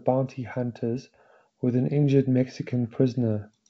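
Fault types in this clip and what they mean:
No faults heard in this clip.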